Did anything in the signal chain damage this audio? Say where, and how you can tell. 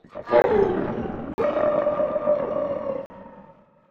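Yes. At the driver or buffer stage, the sound drops to digital silence three times: 0.42 to 0.44 s (20 ms), 1.34 to 1.38 s and 3.06 to 3.10 s (40 ms each). Each block of digital silence cuts in and out with no fade, the signature of the output buffer not being filled in time and being sent as zeros. A network dropout would usually be smoothed or filled by concealment, and a muting stage would fade, but these cut abruptly to silence.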